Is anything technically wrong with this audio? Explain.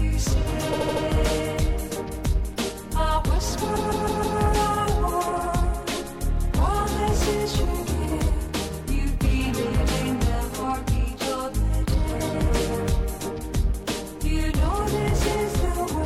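Yes, repeated frames: from 0.72 to 1.03 s a 78 ms block replays four extra times, and from 3.75 to 4.38 s a 157 ms block does the same. Resent compressed frames cause a stutter and lengthen the audio.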